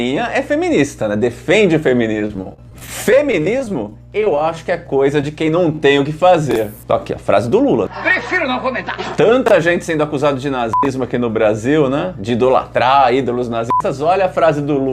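A grounding problem or a nearby transformer is coupling the 60 Hz power line into the signal, producing mains hum: a steady low tone under the sound for the whole clip, sitting roughly 25 dB below the main signal. Because it never stops or changes, it is most noticeable in quieter passages, where the 60 Hz drone and its low harmonics are left on their own.

From 2.19 to 5.24 s, the stream suffers repeated packet loss (robotic sound). Audio went missing or arrived too late again and again, a couple of dozen times, with each hole no longer than about 21 ms. Each time, the receiver covered the hole by stretching the last good sound, and about a tenth of that stretch is made up this way. With patches following so closely, the audio turns choppy, with a robotic edge and small pieces gone.

Shortly after, from 5.76 to 5.79 s, there is one isolated short concealed packet loss. Roughly 10 ms never reached the decoder in time and was filled with about 17 ms of continued sound before blending back into the real signal. 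It is heard as a brief smear or wobble, and any very short sound at that point can disappear.

Finally, at 6.51, 9.46 and 10.83 s, chunks out of order appear. In each case a block of about 21 ms arrived or was written one chunk late, so it plays after the piece that should follow it. Nothing is lost, but the hard joins on either side of the misplaced chunk produce a quick jumbled stutter.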